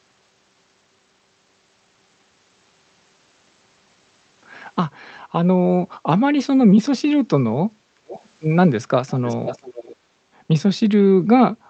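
Echo leak at 8.07 to 8.27 s and again at 9.09 to 9.96 s: a faint copy of the speech returns about half a second late, roughly 20 dB down, likely because a far-end loudspeaker fed the microphone and the echo canceller let part of it through.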